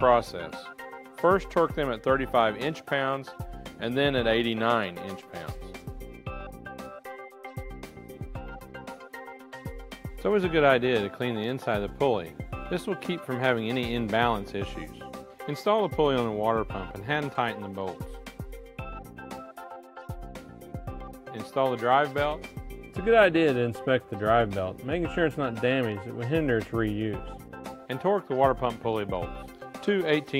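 No technical faults are audible.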